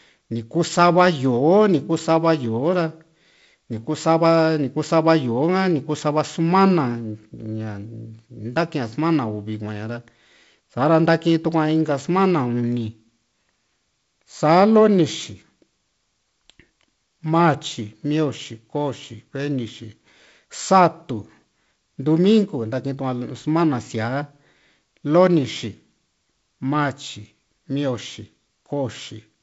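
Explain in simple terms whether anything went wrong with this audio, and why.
Nothing stood out on listening to this speech recording, which has the sound of an ordinary wideband phone call.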